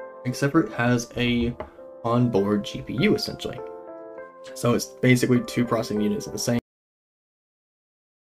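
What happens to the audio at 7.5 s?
At 7.5 s there is only digital silence from a cut-off end: at 6.59 s the sound stops mid-event because its final buffers never played, with no decay, unlike a fade-out.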